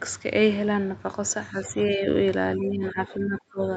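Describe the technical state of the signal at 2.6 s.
At 2.6 s the speech dips by up to about 20 dB until 3.61 s, likely speech suppressed in double talk, with the echo canceller turning down its own talker along with the loudspeaker echo.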